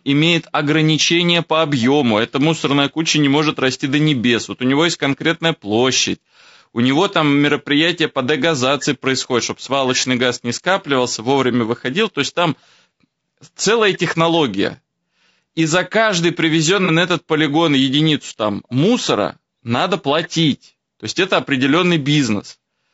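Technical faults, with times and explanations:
Throughout: low-delay AAC compression. The speech sounds rough and grainy, and the damage is plainly audible. Noise fills the gaps between pitch harmonics, and the top band sounds thin and synthetic. The likely cause is AAC-ELD, the low-delay AAC used in video calls. Its short frames resolve pitch poorly and spend bits quickly. The coarseness fits a bitrate of around 32 kbps, which is too low to cover those costs.
16.85–16.90 s: AAC frame loss with concealment. A brief smeared, noisy patch interrupts the speech. The gap fits a single lost frame, about 30 ms of audio. The decoder covered it by reusing the last good spectrum. The loss was short, so the sound did not fade to silence. Instead it smudges for an instant and then recovers.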